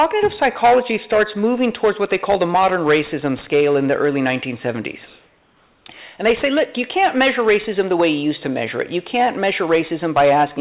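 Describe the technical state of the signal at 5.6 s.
At 5.6 s the background has been replaced by comfort noise, from 5.06 to 5.86 s. The sender likely paused transmission and the receiver filled the gap with synthetic noise. It is steady and featureless, level within about 1 dB, not a silent gate or dropout.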